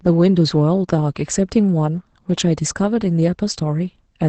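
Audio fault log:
No faults are heard in this speech. It has the sound of a working WebRTC call path, with the high end stopping at about 8 kHz, which fits Opus at a low bitrate of around 20 kbps.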